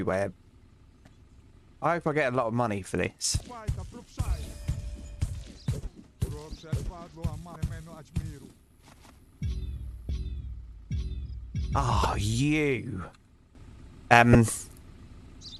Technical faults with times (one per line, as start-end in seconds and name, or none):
3.08-3.24 sudden gain jump
3.37-3.41 damaged data in a compressed stream
7.53-7.56 damaged data in a compressed stream
10.06-10.09 damaged data in a compressed stream
12.02-12.05 damaged data in a compressed stream
13.55-15.60 sudden gain jump
14.32-14.35 damaged data in a compressed stream